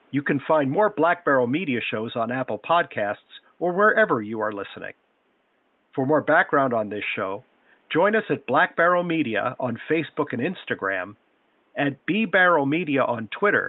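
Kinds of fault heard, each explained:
No faults can be heard.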